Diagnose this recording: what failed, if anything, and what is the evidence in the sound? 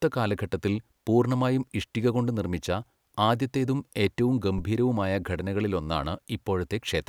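The failure is in the analogue input stage. A phantom power thump interrupts the speech at 4.58 s and is over by 4.64 s. It is a deep, low-frequency bump peaking at about -21 dBFS. It dies away quickly, with a decay of about 13 ms. The cause is a supply voltage switching on or off on a live input. That sudden DC step passes through the coupling capacitors and reaches the converter as a single low thud.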